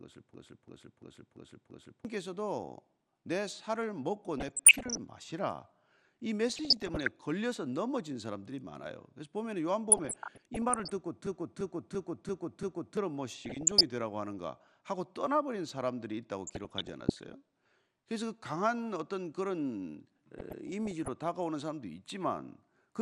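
Right from the start the whole clip has that dull, gurgly, grainy quality, which is most likely MP2 compression at a low rate, around 80 kbps. Layer II carves the sound into 32 sub-bands and rations bits between them. Starved like this, the top bands keep dropping out and coming back, and what's left gets quantised roughly, so the speech loses its sparkle and picks up that granular texture you know from cheap digital radio.

At 0.34 s you get the first system hang loop, running to 2.05 s. The machine stalled while the audio hardware kept replaying the same ring buffer, so one 341 ms slice repeats five times, a lurching stutter at about 2.9 Hz. That length fits a 16384-sample buffer, and roughly a second and a half of real audio is simply gone. The same thing hits again from 11.26 to 12.97 s, same loop length, same five repeats.

In between and after, there's DAB burbling at 4.38–4.97, 6.49–7.11, 9.90–10.90, 13.45–13.83, 16.47–17.33 and 20.38–21.08 s. 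Bit errors slipped past the error correction into the MP2 stream, so bad samples put short blips of noise into single sub-bands and bad scale factors make sub-bands jump in level for up to a frame. The first burst is the worst, with an error rate around 1 percent. The later ones sit nearer half a percent or less.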